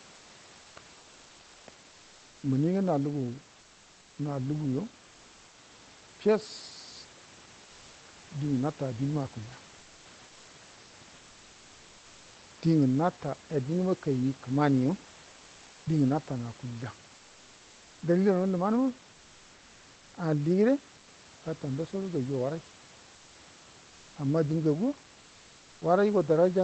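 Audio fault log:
0.15–0.29, 0.61–0.75, 0.99–1.67, 1.89–2.43, 10.27–10.47, 15.29–15.85 (between "nata aduma kaini kəamaniyo" and "dingə natanə akulya"), 17.15–18.01 and 20.99–21.07 s (just before "gata ndasodo gajuwa"): comfort noise in place of the background. In these pauses, lasting 80 to 860 ms, the room noise is replaced by a smooth, featureless hiss about 30 dB below the loudest speech. It is level with the real background or up to about 3 dB quieter. This is likely Opus discontinuous transmission, in which the sender goes quiet and the receiver synthesises the filler noise.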